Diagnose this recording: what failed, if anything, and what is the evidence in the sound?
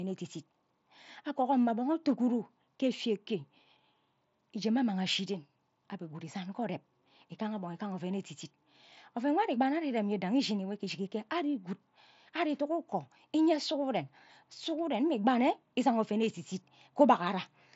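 Nothing stood out on listening: the speech carries the narrow top end of a Bluetooth mSBC headset link, with nothing above about 7.7 kHz, and no failure is audible anywhere in the recording.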